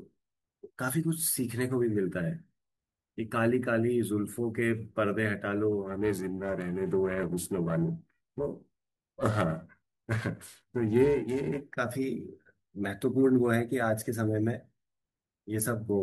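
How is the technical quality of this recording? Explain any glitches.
The recording has one clear technical fault, a stretch of periodic clock jitter from about 5.83 s to 11.61 s. Through that span the converter's sampling clock is being wobbled at a steady rate of around 500 Hz, so each component of the speech picks up sidebands spaced roughly 500 Hz above and below it, strongest around the higher frequencies. This gives the voice a rough, metallic edge that disappears in the pauses. On a spectrogram, thin ghost copies shadow each harmonic at that spacing, while the waveform looks almost unchanged.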